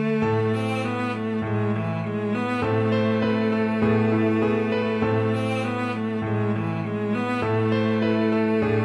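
No technical fault can be heard anywhere in the audio. There is nothing here that needs a time or a cause.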